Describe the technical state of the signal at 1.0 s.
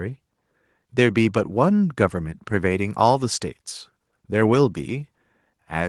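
At 1.0 s the speech signal is intact, with no dropout, clipping, glitch or other fault audible at that moment.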